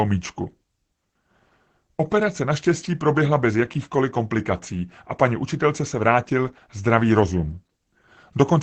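From start to finish the speech carries plainly audible Opus voice compression, running in its SILK speech mode. The top end stops at about 8 kHz, so sibilants lose their sparkle, and the coarse coding of the excitation leaves the voice muffled, a bit hoarse and faintly robotic. That level of damage with a wideband cut-off fits a low bitrate of around 12 kbps.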